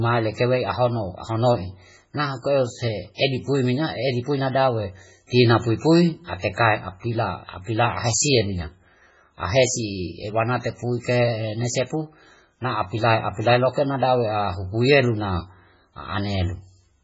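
From start to finish the speech carries heavy MP3 compression damage, likely from encoding at a very low bitrate, one that fits roughly 16 kbps. There is nothing above 7.7 kHz, so the treble is cut off flat and sibilants lose their edge. With so few bits, the encoder drops weak frequency lines and they flicker in and out between frames. That gives the sound a watery, swirling texture, with metallic chirps on s sounds and blurred onsets.

At 3.15 to 3.19 s a pre-echo appears. A sharp attack falls late in a transform block, and the quantisation noise meant for the loud part spreads backwards across the whole block into the quiet gap ahead of it. The result is a short hiss lasting about 44 ms that leads into the onset, and the attack sounds softened and smeared rather than crisp.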